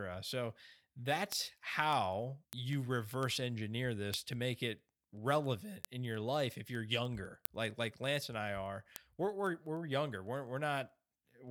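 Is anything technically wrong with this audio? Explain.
Yes. From 0.12 to 11.48 s there are word clock ticks. An unlocked receiving clock, off by roughly 200 ppm, slips one sample about every tenth of a second, giving a steady train of sharp ticks.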